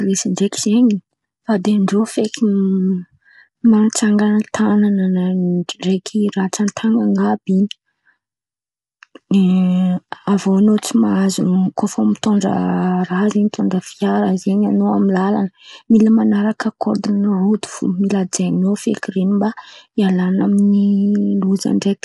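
From start to finish the speech sounds rough and grainy, with a hiss filling the gaps between the pitch harmonics and nothing above 11.6 kHz. This is likely low-delay AAC compression (AAC-ELD), whose short frames cannot resolve harmonics finely and starve each frame of bits, a level of damage that fits a rate around 32 kbps. Unlike standard AAC, whose longer frames resolve harmonics more finely, the damage here falls as noise between the harmonics of the voice.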